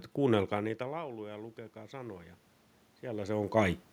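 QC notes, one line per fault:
0.49–2.43 s, automatic gain rising: after the talker moves back around half a second, the input drops by about 19 dB. The gain control answers with a slow climb of about 6 dB over nearly two seconds, so voice and room noise swell up together.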